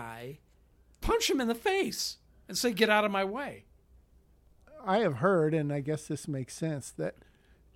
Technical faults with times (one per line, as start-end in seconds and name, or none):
none